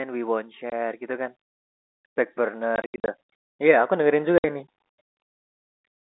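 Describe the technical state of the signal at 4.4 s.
Packets were lost in transit and the receiver filled the gap with silence, leaving a 60 ms hole from 4.38 to 4.44 s, consistent with three 20 ms packets, with hard edges.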